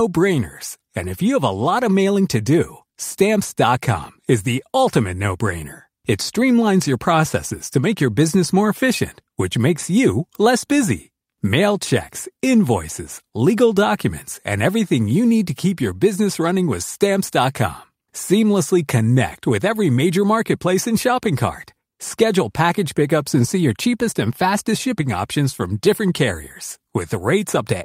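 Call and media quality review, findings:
No faults heard in this speech clip; nothing to attribute to any component.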